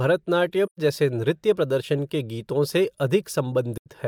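In this speech clip the sound fades briefly to silence twice, at 0.65 to 0.79 s just before "जैसे नृत्य प्रदर्शन के" and again at 3.77 to 3.88 s, each a soft-edged gap. This is AAC frame loss with muting: the decoder zeroed the missing frames' spectrum, and the overlapping windows taper the audio out and back in. The gaps of about 128 ms and 85 ms fit roughly three and two lost frames.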